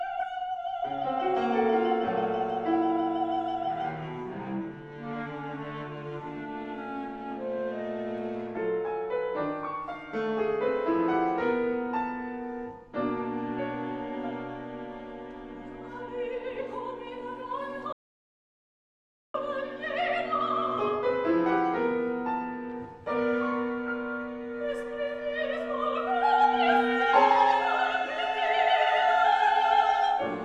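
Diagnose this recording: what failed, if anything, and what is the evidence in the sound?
The failure is an audio dropout to silence at the capture stage, between the input device and the recorder. From 17.93 s to 19.34 s the sound stops abruptly and about 1.42 s is replaced by silence, then resumes mid-flow. The cause is likely a lost input link or momentary mute while recording continued. Unlike a noise gate or codec concealment, the gap holds no room tone or fade and has hard edges, and the missing material is not recoverable.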